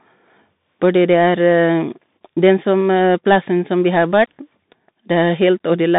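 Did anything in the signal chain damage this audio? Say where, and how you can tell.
Yes. A Bluetooth CVSD headset codec affects the whole clip: the speech stops near 3.8 kHz, sibilants turn scratchy, and granular hiss comes from CVSD's one-bit adaptive-step coding.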